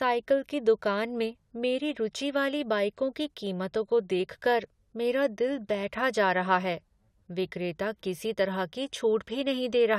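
No technical faults are audible.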